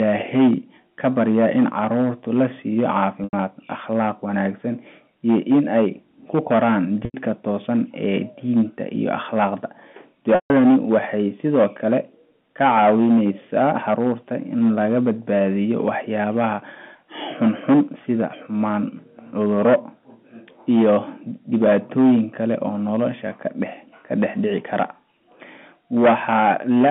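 A speech recording over a telephone line, band-limited to roughly 150 Hz to 3.4 kHz in the way of G.711 A-law coding, with hard clipping throughout. The signal is driven about 12 dB past what the chain can pass, so a few percent of samples are sliced off flat. That gives a rasping fuzz on every loud syllable. On the waveform the peaks show as squared plateaus at the same level. On the spectrogram, harmonic smearing reaches up to the band edge. There is packet loss with pitch repetition at 3.24 to 3.33 s, at 7.05 to 7.14 s (just after "ay ku koraan") and at 10.35 to 10.50 s (just before "waxay sidoo"). The receiver loops the last pitch period to cover each gap. The first two gaps last 90 ms, which points to three lost 30 ms packets, and they sound like a buzzy held tone. The 150 ms gap fades toward silence before speech cross-fades back. A spectrogram shows flat, perfectly regular harmonic stripes in place of moving formants.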